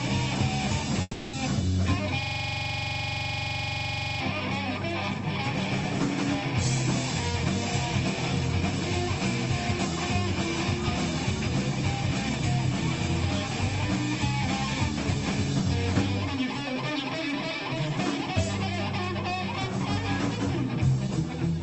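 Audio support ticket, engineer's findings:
1.01–1.35 s: sound smears into a fading buzz for about 320 ms, then a brief gap of about 20 ms before audio resumes with a chunk missing. Likely a long network dropout: packets lost, receiver concealment extended the last sound and decayed to near silence, lost content never recovered. Transport through the Opus call path, audible as band-limiting around 8 kHz.

2.23–4.20 s: rapid machine-gun stutter at about 23.4 Hz, the same fragment repeating about 46 times. System hang loop: host or driver stalled while the audio hardware kept replaying its ring buffer. Each pass is 42.67 ms, which fits a 2048-sample buffer. The loop period of tens of milliseconds is why it reads as a stutter rather than a buzz.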